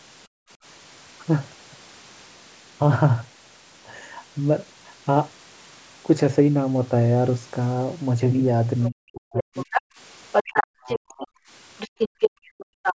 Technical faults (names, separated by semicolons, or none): background gated by the echo canceller; other side's voice leaking through; speech suppressed in double talk